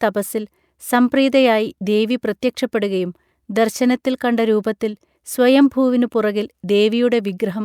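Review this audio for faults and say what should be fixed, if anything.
Nothing needs fixing here, since I couldn't hear a single technical fault anywhere in the speech.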